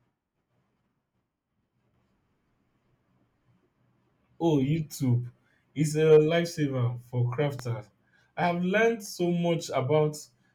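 A speech clip with one loud pop at 7.59 to 7.62 s. It is a single sharp click, a few decibels louder than the speech, which carries on underneath. The likely cause is a brief voltage pulse from a plug, switch, static discharge or driver glitch.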